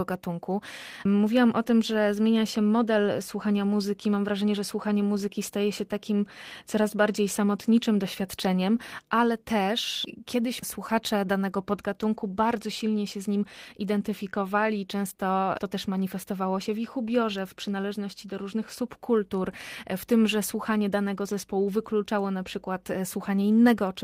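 No technical faults can be heard anywhere in it.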